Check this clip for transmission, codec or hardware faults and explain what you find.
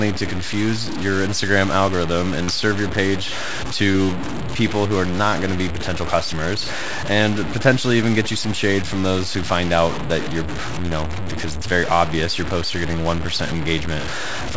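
Two faults stand out: grainy distortion across the whole recording, and two brief dropouts that were concealed.

Low bit depth without dither, throughout: the grit points to the speech likely having been truncated to very few bits, consistent with about 5-bit samples, with no dither. The error tracks the signal and sits only about 10 dB below it, so quiet passages sound rough and granular.

Short concealed packet loss, at 2.44 to 2.50 s and at 3.92 to 3.96 s: about 40 ms and then 20 ms of audio never arrived in time. The receiver extended the preceding sound to bridge each gap, heard as a brief smear or wobble before the real audio resumes. The call path's band stops at 8 kHz.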